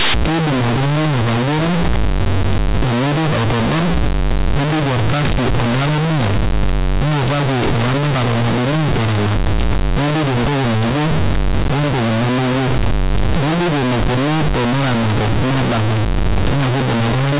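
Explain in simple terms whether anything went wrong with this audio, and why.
Companded audio was read as linear: mu-law telephone bytes were played as plain 8-bit samples, so from start to finish the speech sounds harsh, loud, buzzy and noisy.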